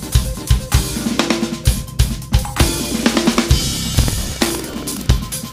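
From 3.90 s to 5.11 s there is buffer tearing: the writer and reader of the playback ring buffer have slipped, so roughly a tenth of each period replays audio about 100 ms old. The hard joins produce a rattling 21.5 Hz buzz, which fits a 2048-sample buffer.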